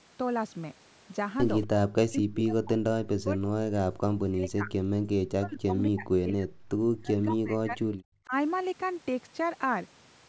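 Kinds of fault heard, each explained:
Echo leak: A loudspeaker-side echo canceller likely failed to remove everything its microphone picked up and sent the remainder back. A faint delayed copy of the speech, roughly 20 dB down and trailing by about 233 ms, surfaces at 1.63 to 1.67 s.
Speech suppressed in double talk: While both sides talked at once, the echo canceller likely mistook this talker for echo and pulled it down. The speech sinks by up to about 40 dB at 2.07–2.84, 3.12–3.83, 4.22–4.73, 5.05–6.49 and 6.96–7.86 s, and dips shallowly at 8.25 s.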